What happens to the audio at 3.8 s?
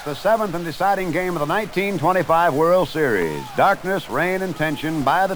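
At 3.8 s the audio carries a harsh, buzzy distortion that runs through the whole clip, likely from a stuck bit: one data bit held fixed shifts about half the samples by a step near -35 dBFS, filling quiet stretches with a gritty noise floor.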